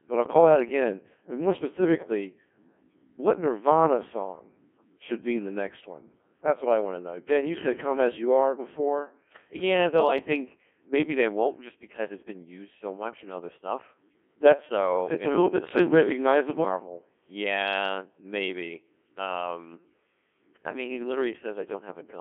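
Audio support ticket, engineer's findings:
Robotic, buzzy speech throughout, with heavy damage. Band limited to roughly 200 Hz to 3.4 kHz. Component: Codec 2 vocoder, at a rate consistent with its 1.6 kbit/s mode. Mechanism: only pitch, voicing, energy and spectral envelope transmitted; decoder rebuilds speech from sine waves, so the original waveform is lost.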